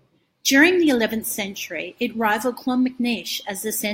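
Nothing stood out as a technical fault on listening to the speech in this recording.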